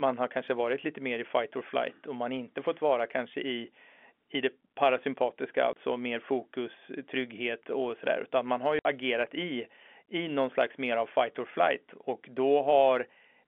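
Swedish speech over a narrowband telephone line (G.711 coding) breaks up from packet loss filled with silence: a 30 ms gap at 5.73 s after "i i det parasympatiska" and a 60 ms gap at 8.79 s after "man har", consistent with one and then two lost 30 ms packets. Each shows as a flat silent run in the waveform and a blank vertical stripe on the spectrogram, with hard edges.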